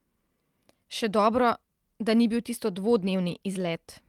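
Speech, with brief rough, noisy patches at 2.13–2.15 s and 2.99–3.05 s but no gaps: a lost packet rebuilt from error correction, played from low-bitrate copies.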